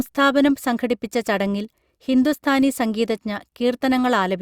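Speech, with no technical faults audible anywhere in it.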